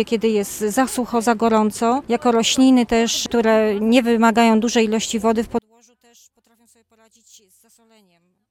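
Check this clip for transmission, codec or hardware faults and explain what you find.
One fault is present, a case of one channel inverted, running from 5.59 s to the end at 8.50 s. Here the level collapses by about 36 dB, leaving only a faint residue where full sound was. The likely cause is one stereo channel flipping polarity, so the shared content cancels when summed to mono. A spectrogram shows the energy dropping abruptly across the band, and the waveform shrinks to a near-flat trace.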